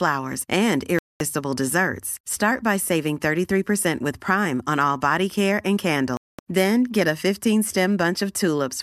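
The receiver lost the signal twice in this speech, a digital broadcast dropout, muting until valid frames returned. The audio cuts to silence from 0.99 to 1.21 s and again from 6.17 to 6.39 s. Each gap lasts about 0.22 s, which fits a run of several lost frames, and that speech is gone.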